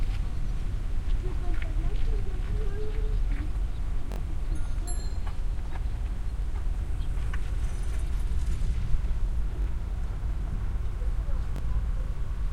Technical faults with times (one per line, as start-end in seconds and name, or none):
4.12-4.18 repeated buffer
6.42-6.44 repeated buffer
9.62-9.66 repeated buffer
11.56-11.61 repeated buffer